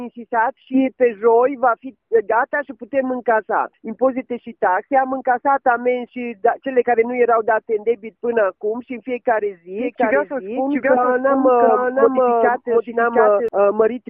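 At about 9.78 s a doubled audio track kicks in and runs until about 13.48 s. A second full-band copy of the sound trails the original by roughly 0.7 s, at much the same loudness, so everything gets a flat, dry echo with no decay or room tone. It switches on and off abruptly at those points. The likely cause is a second capture arriving via a slower path, or an edit holding two copies out of step.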